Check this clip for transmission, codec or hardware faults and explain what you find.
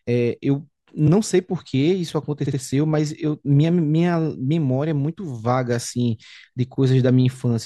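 The speech has repeated frames at two points.

Repeated frames at 1.07 to 1.11 s: a block of compressed audio about 43 ms long was delivered twice, so the decoder plays the same slice again immediately. This fits two codec frames being duplicated. It is heard as a brief stutter, and it adds 43 ms to the timeline.

Repeated frames at 2.45 to 2.58 s: a 64 ms block, consistent with three frames, plays two extra times. This produces a triple stutter, and it adds 128 ms.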